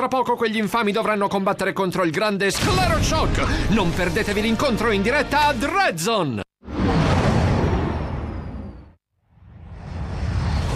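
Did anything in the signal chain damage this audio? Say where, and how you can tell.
No, nothing in the signal chain left an audible mark on this audio. Every stage, from capture to playback, passes the sound along without any damage a listener can point to.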